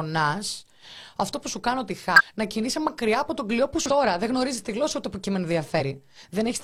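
Short glitches break into the speech at 2.14–2.21 s, between "που σου κάνω τη" and "να κινείσαι μακριά από", at 3.86–3.91 s after "από τον κλειό που", and at 5.76–5.82 s. They come from damaged data in the compressed stream: the decoder misread the corrupted frames, lost sync and had to find the next frame header.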